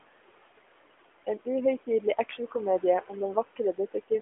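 A speech recording with noise suppressor artifacts throughout: the room noise, already about 18 dB below the voice, is pushed down by about another 18 dB between phrases and swells back underneath them. This pumping tied to the speech is what separates it from the steady dullness of the narrowband mobile codec, which stops near 3.5 kHz. Between 3.56 and 4.11 s there is speech cut by the noise suppressor. About a tenth of a second of quiet speech in total is turned down by up to about 16 dB along with the background, so it sounds swallowed. A network dropout would instead leave an abrupt hard gap.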